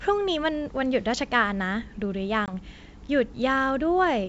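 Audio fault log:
2.46 to 2.54 s, packet loss on an ADPCM call. About 20 ms of the speech drops out into a hard-edged silence, likely from a couple of lost packets. The decoder's adaptive predictor and step size lose track of the sender's state during the gap. When the speech resumes, it comes back slightly distorted, then settles over the next tens of milliseconds. The G.722 wideband coding around the gap stays clear, with at most faint coding hiss.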